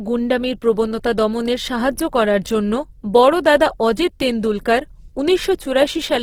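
A speech clip with Opus compression damage throughout: it was likely squeezed through the Opus codec in its CELT music mode at a low rate, with a plainly audible result that fits roughly 16 kbps. Starved of bits, the encoder keeps each band's energy but refills the detail with folded or noise content, so the voice turns grainy, rough and noisy rather than swirly, while the bandwidth stays full, reaching up to about 20.2 kHz.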